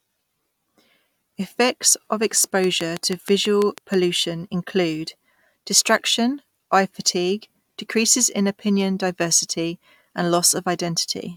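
A train of clicks runs from 2.64 to 3.95 s in this speech recording: a regular ticking at about 6.2 clicks per second, roughly ten pulses of near-identical shape, each peaking some 15 dB above the speech and audible whether or not anyone is talking. The steady spacing and repeated shape point to a single periodic source, most likely electrical interference from nearby equipment or a faulty connection or power supply.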